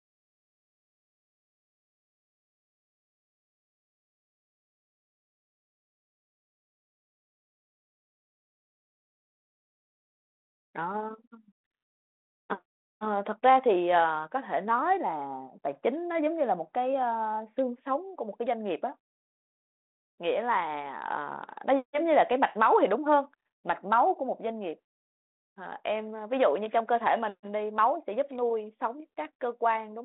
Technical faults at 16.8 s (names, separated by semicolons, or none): none